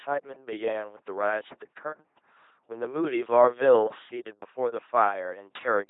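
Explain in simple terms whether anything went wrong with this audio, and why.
LPC-10 vocoder damage runs through the whole clip, start to finish. Rather than keeping the real sound, it rebuilds the speech from a plain buzz or hiss shaped by a rough model of the mouth and throat. The result is a heavily robotic, mechanical voice, with nothing above 3.8 kHz.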